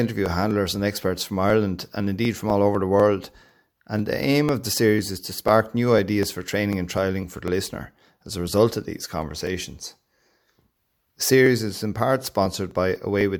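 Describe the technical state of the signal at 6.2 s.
Regular ticks mark the speech every 0.25 s from 0.26 to 13.21 s: periodic USB or driver dropouts, each skipping about a millisecond of audio.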